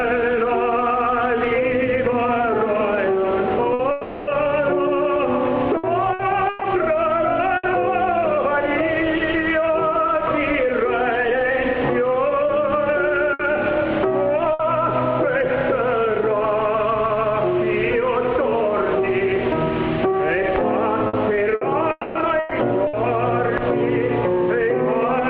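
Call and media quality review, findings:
Burst of packet loss at 3.73–3.82 s, 13.33–13.42 s and 14.53–14.62 s. Jitter buffer / packet loss concealment (PLC). Each event drops about 60 ms. The last sound is extended and faded by concealment, then audio resumes past the gap. Short smeared hold, then a jump forward.

Long network dropout, 3.91–4.30 s, directly after the first burst. Likely cause: network path interruption, with the receiver concealing throughout. About 360 ms is lost and fully covered by a fading continuation of the preceding sound, with no silent stretch. Audio returns without the missing segment.

Long network dropout, 21.91–22.18 s, inside the second robotic stretch. Likely cause: transport outage. About 240 ms is lost and bridged entirely by fading concealment, with no silence. Resumed audio skips the lost portion.

Repeated packet loss (robotic sound), 5.77–7.66 s. Jitter buffer / PLC under sustained loss. 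Four gaps total 300 ms, the longest 120 ms, so about 16% of the span is concealed. Repeated patch-and-resume cycles give choppy audio with pieces missing.

Repeated packet loss (robotic sound), 21.07–22.96 s. Same mechanism and figures: four gaps, 300 ms concealed, longest 120 ms, about 16% of the span. Choppy, robotic texture, compounded by the dropout at 21.91 s.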